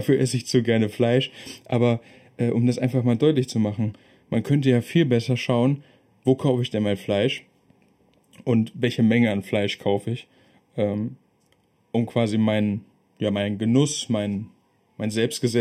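Throughout the speech, channel delay causes comb filtering. One channel lags by under half a millisecond, so summing cancels evenly spaced frequencies starting around 1.5 kHz, sounding hollow.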